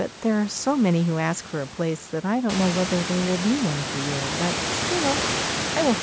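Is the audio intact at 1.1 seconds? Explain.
Yes, the speech at 1.1 seconds is intact, with no fault at that moment.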